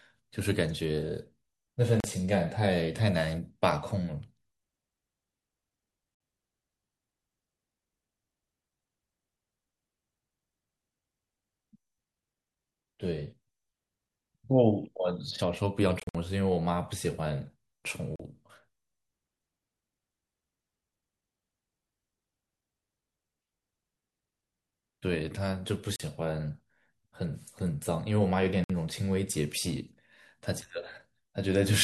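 Speech with short, hard-edged silences at 2.00 s, 6.15 s, 16.00–16.15 s (several gaps totalling 112 ms), 18.16 s, 25.96 s and 28.64 s, each 37–56 ms. The audio resumes as if it had played on, likely from Bluetooth dropouts, where late packets were discarded.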